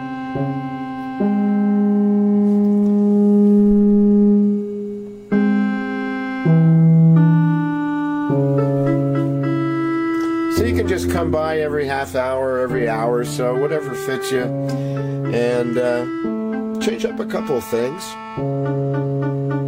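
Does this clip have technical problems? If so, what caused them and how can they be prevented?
No, this clip has no technical problems, so there is nothing to trace to a cause or prevent.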